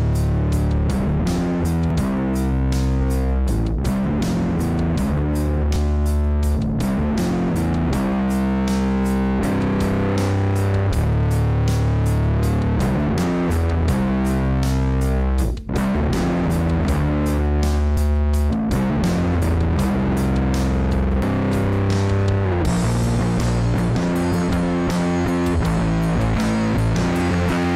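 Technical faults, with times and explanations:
1.90, 5.76, 13.24, 17.97, 18.90 and 27.21 s: dropped buffer (overrun). The sound jumps ahead about 50 ms with no silence. Samples were likely overwritten before being read. The two sides butt together, unlike a gap-leaving dropout.
21.22 s: dropped buffer (overrun). A longer jump of about 150 ms, likely several buffer lengths lost at once.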